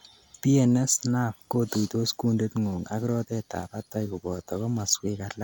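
No technical faults can be heard in this speech recording. Nothing in the sound points to a break, dropout or other failure at any moment.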